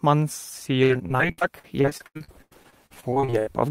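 From 0.83 s to 3.48 s, repeated packet loss breaks up the speech. More than two dozen short holes follow one another, the longest about 90 ms. Each is patched by stretching the last sound, about a third of the stretch. It sounds choppy and robotic.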